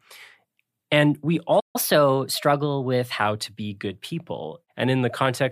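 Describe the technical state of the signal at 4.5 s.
At 4.5 s the speech signal is intact, with no dropout, clipping, distortion or other technical fault at that moment.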